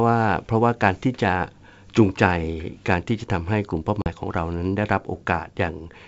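At about 4.02 s there's packet loss on the ADPCM call: a hard 40 ms gap, a couple of packets, and the decoder's predictor comes back out of step, so the speech returns slightly distorted.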